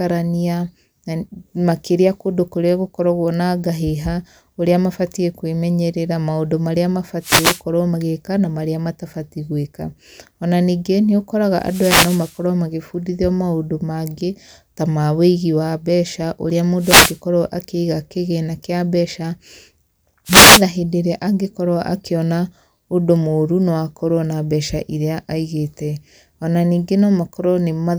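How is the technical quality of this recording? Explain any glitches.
The recording is marred by four brief wireless microphone noise hits. They fall at 7.20 to 7.62 s, between "kwĩmenyerera maũndũ marĩa" and "magĩka na marĩa matabatie"; at 11.56 to 12.42 s; at 16.77 to 17.20 s, between "mbeca ũrĩa" and "akĩiga kĩgĩna"; and at 20.25 to 20.64 s. Each lasts roughly 0.4 to 0.9 s. As the radio link fades through reflection cancellation, receiver hiss swells into a swish of static. Unlike a digital dropout, the sound is buried under noise rather than cut to silence.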